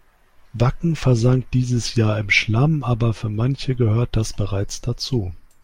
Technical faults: none

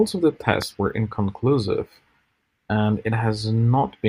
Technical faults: loud pop

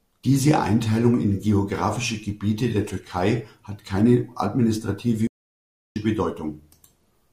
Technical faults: playback stall

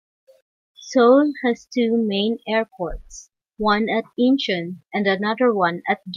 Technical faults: none

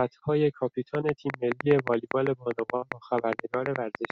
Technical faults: train of clicks; burst of packet loss

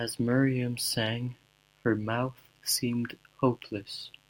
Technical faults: mains buzz

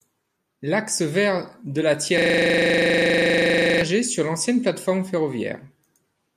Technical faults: system hang loop

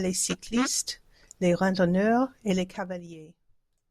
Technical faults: zipper noise

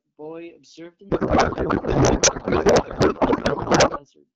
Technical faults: codec payload misread

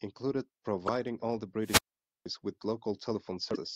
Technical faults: damaged data in a compressed stream; wireless microphone squelch dropout

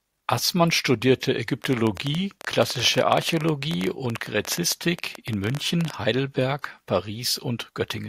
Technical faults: train of clicks

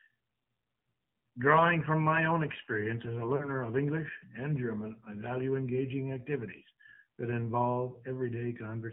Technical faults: AMR narrowband mobile codec; lost AMR speech frames

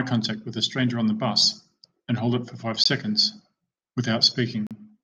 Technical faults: Bluetooth stall

